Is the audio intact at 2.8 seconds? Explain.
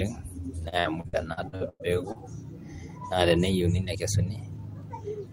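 Yes, the speech at 2.8 seconds is intact, with no dropout, click, distortion or other fault audible at that point.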